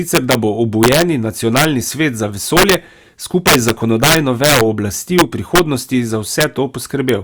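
Integer overflow cracks this speech at 0.15–0.35, 0.83–1.02, 1.57–1.65, 2.57–2.74, 3.47–4.61 (worst, about 8 dB over), 5.19–5.59, 6.41–6.44 and 7.09 s. Loud peaks exceed the integer limit and wrap to the opposite sign instead of limiting, producing violent cracks far harsher than clipping.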